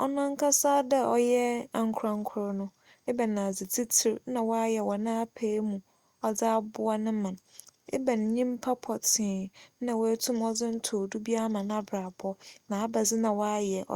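No technical faults can be heard in this speech.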